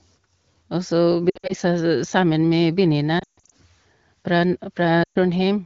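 Lost AMR speech frames break up the speech at 1.30 to 1.54 s (just before "sammen med"), 3.19 to 3.50 s (just after "sammen med") and 5.03 to 5.18 s (after "fra n"). Frames that failed their checksum were replaced by the decoder's guess from the last good pitch and vocal-tract settings at falling gain. The first gap sounds like warbling dips. The 140 ms run in the second gap fades towards silence. The speech then returns briefly rough through the otherwise clear wideband coding.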